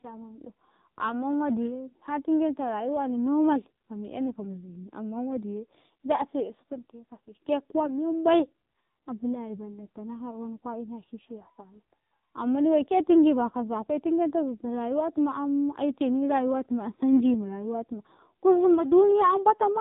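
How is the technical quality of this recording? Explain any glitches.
The recording is heavily degraded by narrowband mobile coding throughout. The AMR narrowband mobile codec is active for the whole clip. The sound is band-limited to about 3.8 kHz, so sibilance and airiness are gone. The speech comes through buzzy and synthetic, because a vocal-tract model driven by sparse pulses stands in for the real waveform. The heavy damage fits one of the low AMR-NB modes, around 6 kbps.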